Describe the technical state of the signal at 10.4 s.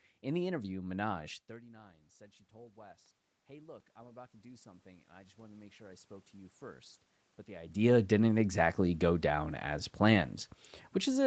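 At 10.4 s the audio is intact, with no fault in the signal at that moment.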